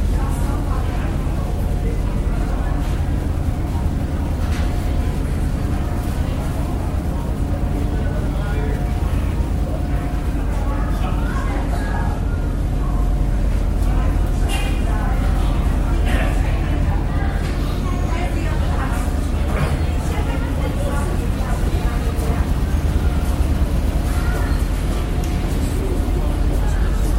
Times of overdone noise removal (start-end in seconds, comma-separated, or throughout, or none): none